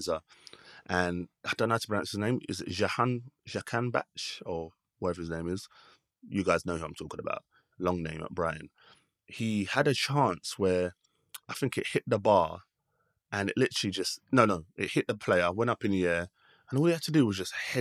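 No technical faults can be heard anywhere in the speech recording. There is nothing to mark at any point in it.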